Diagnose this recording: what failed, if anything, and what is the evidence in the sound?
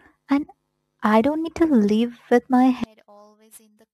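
Sample clock jitter at the converter stage runs through the whole speech clip. A fine hiss and roughness rides on the speech. It grows on loud syllables and bright consonants and drops away in the gaps. The sampling instants wander by a few microseconds. Each timing error turns into an amplitude error scaled by the waveform's slope, so steep, high-frequency parts suffer most. The resulting noise sits roughly 35 dB below the signal.

One channel inverted shows from 2.84 s to the end at 3.94 s. Summed to mono, the speech suddenly collapses by about 33 dB and becomes faint. Centred content is common to both channels, so it cancels when one side is flipped. Only the small difference between channels survives. The likely cause is a polarity reversal on one leg in the analogue wiring, switched in at that point.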